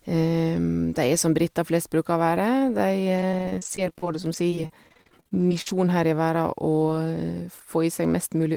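A speech recording, and between 3.16 and 5.74 s, just before "her i", it breaks into repeated packet loss with a robotic sound. Dozens of short holes, the longest 46 ms, are patched by stretching the preceding sound, so roughly half a second is rebuilt and about 22% of the stretch is concealed. On a spectrogram this shows as a run of smeared, repeated vertical slices. The waveform shows flattened, cloned segments at a choppy, buzzy rate.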